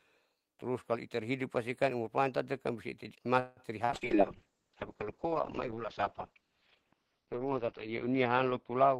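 A speech clip. At 3.39 to 3.60 s the sound stretches into a fading buzz, a smeared horizontal streak on a spectrogram, before resuming where it stopped: a call audio freeze, likely from delayed packets draining the jitter buffer. Two short concealed packet losses follow, at 3.85 to 3.92 s and 3.97 to 4.04 s, where about 40 ms each went missing and was patched with continued sound, heard as brief smears showing as blurred patches in the waveform. From 3.91 s to the end, a call bitrate drop from 32 to 6 kbps turns the speech rough and muffled, and the spectrogram shows everything above about 6 kHz cut away.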